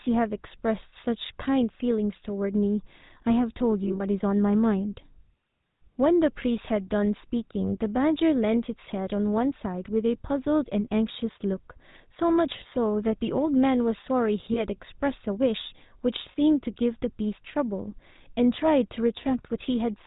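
GSM full-rate codec damage runs through the whole speech clip, with a buzzy, gravelly roughness that fits a 13 kbps stream: pulse-driven vocal-tract modelling, nothing above 4 kHz. Lost GSM frames at 3.84 to 4.02 s (about 100 ms scattered over 160 ms, runs up to around 40 ms), 14.54 to 14.61 s and 16.32 to 16.37 s hold the last good frame, so the sound rings metallically.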